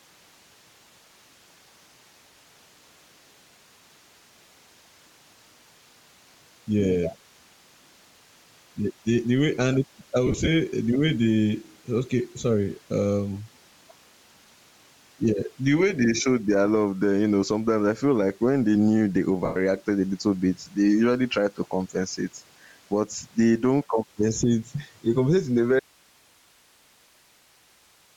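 A speech recording with several technical faults. The level pumps throughout, swinging by about 10 dB, so loud and soft parts sit too close together. This is likely gain pumping from excessive gain feeding a fast limiter. The room noise sits about 44 dB below the speech. The whole clip also carries Bluetooth LC3 compression. The upper band is thin and noise-filled, giving the speech a breathy, grainy edge. That damage fits LC3 at around 32 kbps with 7.5 ms frames. Lost LE Audio frames break the sound at 10.27–10.48 s, with about 105 ms missing in short runs of up to roughly 30 ms. They break it again at 19.45–19.56 s. Each time the decoder repeats the last spectrum with scrambled phase, turning the speech into a brief noisy smear. At 25.80 s the signal cuts out abruptly and never returns. Only hiss remains to the end, about 35 dB below the speech. This is likely an audio dropout to a faint residue. 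The input was probably lost while the path after it stayed live.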